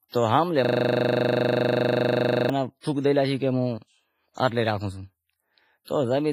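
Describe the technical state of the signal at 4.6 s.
At 4.6 s the speech carries the same WMA compression damage heard across the whole clip: heavy, ringing, washy smearing with hiss that pumps along with the signal, and nothing above 15.5 kHz. It's likely a long-block transform coder starved at roughly 24 kbps, zeroing weak detail.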